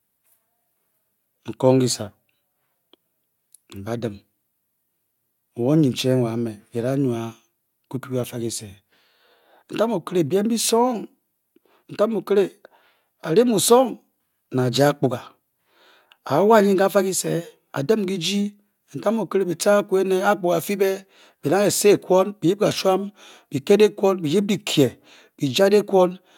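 No technical faults can be heard in the recording at any point.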